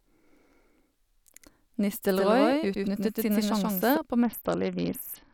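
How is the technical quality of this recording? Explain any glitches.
The recording has two distinct faults from about 2.1 s onward: a doubled track followed by a Bluetooth codec degradation near the end.

From 2.09 s to 3.97 s there is a doubled audio track. A second full-band copy of the speech sits roughly 150 ms behind the original at about the same level, producing a distinct slapback rather than a reverb tail. It has no decay or room colouring, and it starts and stops abruptly at those boundaries. The likely cause is the signal being captured twice, once through a slower path, or an edit leaving two misaligned copies.

From 4.23 s to the end of the clip there is a Bluetooth SBC bit pool drop. The treble becomes dull and a gritty, coarse noise rides on the speech. That points to the phone cutting the SBC bit pool from 31 to about 7, roughly 61 kbps, to keep a congested link alive. 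At that allocation the upper sub-bands get few or no bits and the remaining bands are quantised coarsely. The degradation lasts until the clip ends.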